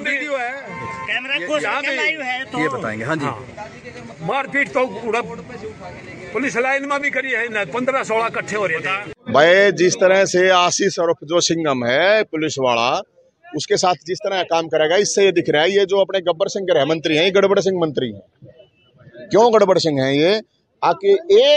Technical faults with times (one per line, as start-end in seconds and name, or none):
none